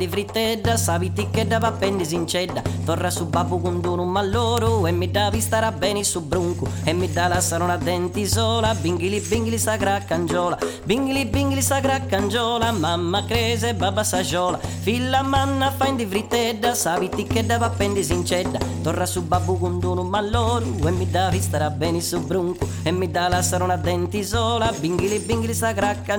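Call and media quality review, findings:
Bit error spikes: single broadband ticks at 1.62 s, 4.58 s and 10.28 s, peaking around -9, -3 and -15 dBFS, unrelated to the surrounding sound. The probable source is memory or a digital link flipping one bit, which throws one or two samples by a power of two before they snap back.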